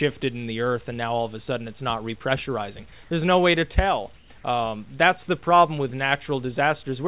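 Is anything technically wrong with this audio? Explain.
Yes. From 4.16 to 4.3 s, a 140 ms stretch of the background, which sits about 28 dB below the loud parts, gives way to a smoother, steadier noise about 4 dB quieter. This is most likely comfort noise in place of the background: the sender stopped transmitting during a detected pause, and the receiver filled the gap with synthetic noise. Unlike a dropout or noise gate, the gap is never silent, just a different texture. The band stops at 4 kHz, consistent with a G.711 A-law call at 64 kbps.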